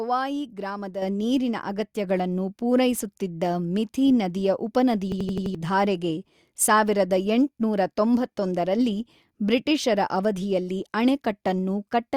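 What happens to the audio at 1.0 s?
Right around 1.02 s the microphone volume gets stepped up, and you can hear it. The level jumps by about 6 dB in one go, and the voice and the background noise come up together. That's the giveaway: the call software decided the mic was running too quiet and bumped the device's input gain in a single step instead of easing it up. So everything after that point sits noticeably louder than the first second of speech.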